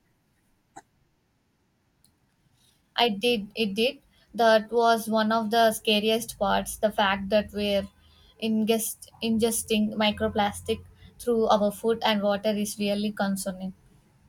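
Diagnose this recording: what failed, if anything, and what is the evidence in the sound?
Nothing in this speech recording points to a failure at any stage, so there's nothing here to diagnose.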